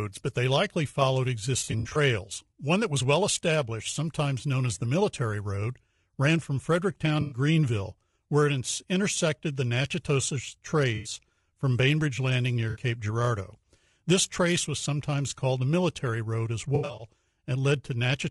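From start to finish the speech has a rough, grainy edge, with noise filling the gaps between harmonics and a top end that sounds thinned and a bit synthetic. That's low-delay AAC compression, likely AAC-ELD, where the short frames can't resolve pitch harmonics cleanly. The damage is plainly audible and fits a bitrate of around 32 kbps.

On top of that there's AAC frame loss with concealment. Right after "but they likely followed", from 1.59 to 1.97 s, about 180 ms goes missing in bits scattered over roughly 360 ms, with the longest gap around 70 ms. The decoder patches each gap from the last good spectrum, so you get a smeared, phasey stretch. Shorter dropouts follow at 7.21–7.38 s and 10.95–11.13 s (100 ms each) and 12.69–12.79 s (60 ms). Each one is a brief noisy smudge. A last scattered cluster at 16.75–17.06 s loses 180 ms over about 240 ms, again with the longest run around 70 ms.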